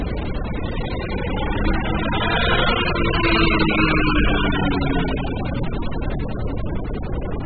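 From start to finish, the audio carries heavy AAC compression damage. Nothing is heard above 4.6 kHz, so the sound is dull and closed in. The encoder has likely starved the upper bands and the fine detail, which fits a very low bitrate of around 8 kbps. Whole regions of the spectrum go missing or turn to coarse substitute noise. Sustained sounds warble, and bright edges turn fizzy and smeared.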